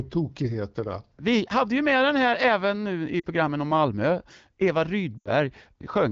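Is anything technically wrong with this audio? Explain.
Yes. Lost AMR speech frames occur at 3.19 to 3.25 s, right after "här även nu i", and at 5.17 to 5.31 s, through wideband AMR speech whose clarity fits a rate around 12.65 kbit/s. Frames corrupted on the radio link failed their checksum, so the decoder repeated the last good pitch and vocal tract settings at falling gain. The first gap, about 40 ms, drops toward near silence. The second, about 80 ms, fades to near silence within two frames before the speech returns weakly.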